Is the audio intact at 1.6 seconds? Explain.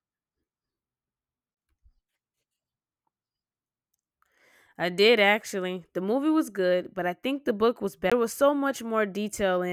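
No. Just before that point, from 1.54 to 1.57 s, a CD skip occurs: the laser loses its track and lands on another turn of the disc's spiral. Playback mutes for about 20 ms, and the speech resumes from a different place.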